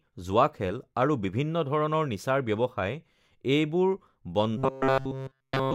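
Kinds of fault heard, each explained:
Robotic sound from repeated short buffers: fresh audio likely stopped arriving in time, so one slice of about 7.5 ms was replayed repeatedly in place of skipped audio. From 4.57 to 5.74 s the speech becomes a rigid, metallic buzz fixed near 133 Hz.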